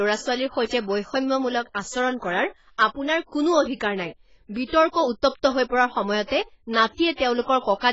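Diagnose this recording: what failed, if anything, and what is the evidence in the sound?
Codec stage: likely heavy AAC compression at a low bitrate around 16 kbps. Nothing above 7.6 kHz throughout, so the speech sounds dull and smeared.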